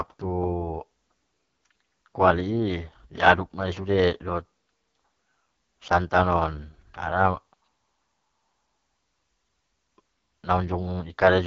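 Throughout the clip, the speech has been passed through the AMR wideband (HD Voice) codec at what sounds like its lowest 6.6 kbit/s mode, so the vocal tract model is starved of pulses. The result is heavy, rough, raspy damage, with nothing above about 7.4 kHz.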